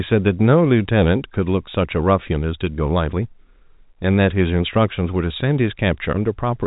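No faults are audible anywhere in this speech clip.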